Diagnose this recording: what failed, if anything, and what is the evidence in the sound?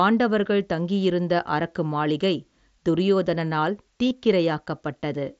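The wireless link between headset and phone dropped out: there's concealed Bluetooth headset packet loss at 4.10 s, a gap of about 15 ms, which fits a couple of lost packets. The receiver filled it by repeating the best-matching recent stretch of the speech, carried in the mSBC wideband audio.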